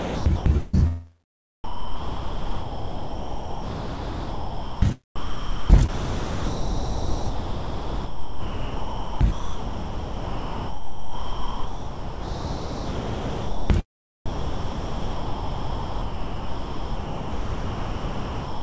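The audio comes through a call path with nothing above 8 kHz. Sound chopped by the voice detector appears from 0.00 to 0.75 s and from 5.16 to 13.70 s. Holes totalling about 0.52 s and 8.24 s give way to comfort noise, likely from the sender's detector switching repeatedly. Sound dropped by the voice detector runs from 1.64 to 4.82 s and from 14.26 s to the end. Steady comfort noise replaces the sound for 3.18 s and 4.37 s, likely because the detector took it for background.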